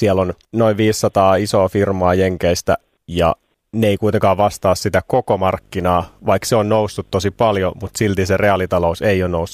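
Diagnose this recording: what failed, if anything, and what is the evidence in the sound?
Video or display buzz enters at the analogue wiring stage. From 5.5 s, right after "kuitenkaan vastaa sitä koko", a 50 Hz buzz with hash above it runs to the end, roughly 30 dB under the speech. A 15.6 kHz line tone sits on top. A screen or video cable is coupling into the audio path.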